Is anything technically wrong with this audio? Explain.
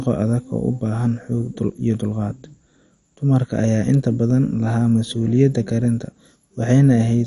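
Yes. Throughout, the speech sounds dull and gurgling, with granular grit and nothing above about 11.3 kHz. This is likely MP2 compression at a low rate, around 48 kbps, where upper sub-bands are dropped and the remaining bands are coarsely quantised.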